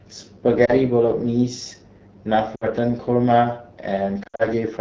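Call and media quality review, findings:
AMR wideband (HD Voice) codec, whole clip: rough, raspy speech from the vocal-tract model at a low mode, which fits AMR-WB around 8.85 kbit/s.

Lost AMR speech frames: brief dip at 0.65 s (one 20 ms frame); drop to near silence at 2.55–2.67 s (60 ms); scattered losses at 4.23–4.47 s, longest run 60 ms. Decoder concealment, radio errors.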